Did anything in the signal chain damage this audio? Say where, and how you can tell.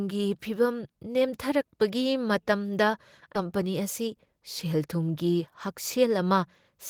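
Yes. At 3.35 s the speech jumps forward with no gap, about 0.7 s of audio simply gone and the two sides butted together. This is a skip ahead in the network jitter buffer: late or overflowing audio was dropped while newer packets waited.

From 3.45 to 5.09 s the speech runs hurried, about 108% speed with unchanged pitch. This is a jitter buffer speed-up. After the backlog, the receiver trimmed short pitch-period slices repeatedly, shedding roughly 150 ms to pull its delay back down.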